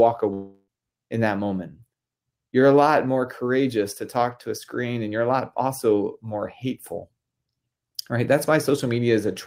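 From 0.33 to 0.70 s the speech breaks off: a buzzy continuation of the last sound fills about 0.34 s and decays to near-silence, then audio resumes with roughly 0.34 s absent. This is likely a long network dropout, with concealment stretching the final received audio.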